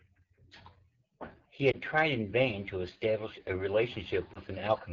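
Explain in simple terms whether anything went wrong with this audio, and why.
The call audio went through the AMR wideband (HD Voice) codec, the system phones use to squeeze speech into a small data stream. Here it ran at one of its lowest settings, so it had too little data to rebuild the voice faithfully. It models the voice's pitch and the shape of the mouth and throat, then fills the very top of the sound with shaped noise. At this setting the speech comes out noticeably rough and raspy throughout.

There are also lost AMR speech frames, at about 1.71 to 1.76 s and again at about 4.34 to 4.39 s. Radio errors corrupted a small chunk of speech data, which fits a single lost frame each time, so the decoder had to guess. It reused the last good pitch and voice shape at a lower level to cover the gap. Each gap sounds like a brief dip or warble, with the voice coming back weak or rough for a moment.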